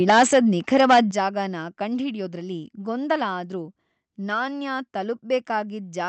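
From 0.09 to 0.39 s the loudest syllables turn harsh and crackly, their peaks flattened rather than rounded. This is microphone overload: the input was driven roughly 9 dB past the converter's ceiling, so a sizeable share of samples, somewhere around a sixth, were sliced off flat at the converter's limit. The cause is likely an input volume set too high for this talker. The same gritty edge returns from 0.74 to 1.0 s, overshooting by about 8 dB.

At 0.1 s, right at the start of that first distorted stretch, the level of both voice and background drops abruptly by about 3 dB. A second, much larger drop of about 8 dB follows at 1.11 s, just after the second overload. Each sudden step is a microphone volume stepped down, likely the call software reacting to the clipping by cutting the device's input gain in a single move. The audio reaches us through an Opus call path whose band stops at 8 kHz, so the crackle of the clipped peaks carries no top-end sparkle.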